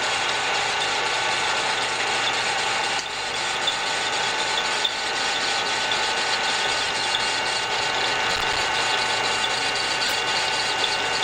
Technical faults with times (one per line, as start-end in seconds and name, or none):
0.69-0.74 corrupt frame decoded
4.70-4.76 corrupt frame decoded
8.31-8.61 processor overload crackle
10.05-10.12 corrupt frame decoded